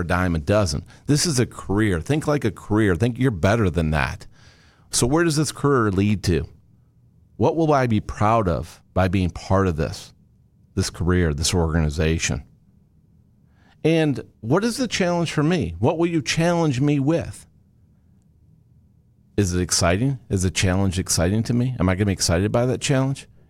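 No technical faults can be heard anywhere in the recording.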